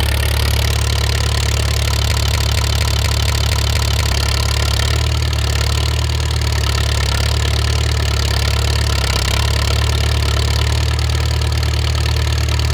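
From 2.11 to 4.12 s, a broken-record loop repeats one 236 ms fragment eight times, likely from a stalled stream. The waveform and spectrogram show identical repeating blocks.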